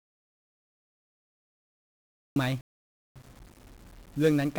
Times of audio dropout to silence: 0.00-2.36

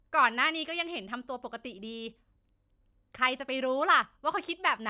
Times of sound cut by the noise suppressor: none

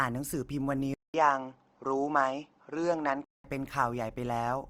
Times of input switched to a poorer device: 0.94-3.44

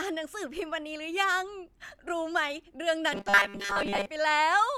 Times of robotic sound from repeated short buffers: 3.13-4.07

